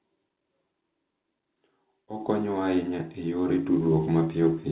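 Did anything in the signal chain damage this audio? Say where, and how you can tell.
Yes, at the call-processing stage there's automatic gain rising from about 1.94 s to 4.63 s. The speech and the background noise floor swell together, climbing about 6 dB over those 2.7 seconds. That joint lift gives it away. The AGC decided the input was too quiet and slowly raised its gain, pulling the room up with the speech. The band-limiting at 4 kHz is just the call path, consistent with a G.711 mu-law link.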